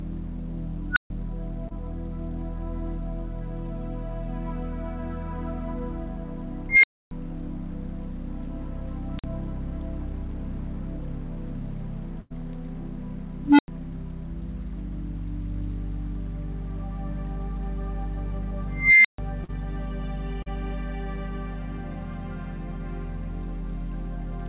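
At 0.92 s an unstable filter takes over. Bad coefficients let its output grow without limit. A squeal of about 1.5 kHz builds in roughly 46 ms, overflows, and cuts to about 140 ms of silence.

At 1.68 s comes a short concealed packet loss. About 20 ms never arrived. The receiver carried the last sound forward for about 24 ms, then blended back. It is a brief smear.

The filter fails again at 6.69 s. This time a tone near 2 kHz swells over about 142 ms. About 280 ms of silence follows.

At 9.15 s a thin, high squeal near 5 kHz builds in about 45 ms. It drops out for about 46 ms.

A burst of packet loss hits at 12.20 s. About 100 ms is missing. Concealment fills about 97 ms with a fading continuation of the last sound. The audio then resumes further on.

At 13.43 s a low hum near 300 Hz grows over about 153 ms. It blows up and is followed by about 93 ms of silence.

The slowest build starts at 18.73 s. 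A tone near 2 kHz rises for about 320 ms and then falls silent for about 140 ms.

Two more short concealed losses follow. At 19.44 s about 40 ms is lost and roughly 42 ms is patched. At 20.42 s about 40 ms is lost and about 36 ms is filled. Each is a quick wobble.

The call path, which cuts everything above 4 kHz, carries all of this.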